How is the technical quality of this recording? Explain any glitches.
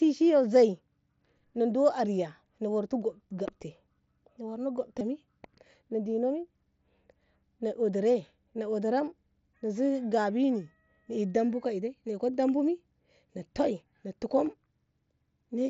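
Two brief dropouts from concealed Bluetooth headset packet loss occur, at 3.28 to 3.31 s and at 4.99 s. Voice packets from the headset were lost, about 22.5 ms and then 15 ms, which fits three and two missing frames. The receiver repeated a recent stretch of waveform to cover each gap. The result is a buzzy blip with a slight warble as the real sound resumes. The wideband mSBC link adds only light grain.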